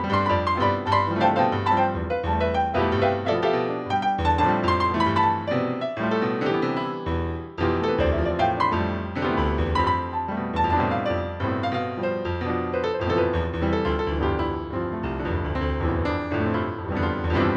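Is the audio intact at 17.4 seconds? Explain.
Yes, the audio at 17.4 seconds is intact, with no fault audible at that moment.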